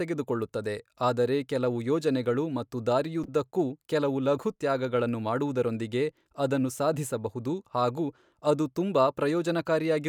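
A speech recording with one corrupt frame decoded, from 3.24 to 3.28 s: a short burst of misplaced spectral energy, peaking around -25 dBFS, heard as a brief glitch. Damaged bits in a handful of compressed frames were decoded anyway, producing wrong gains and frequencies.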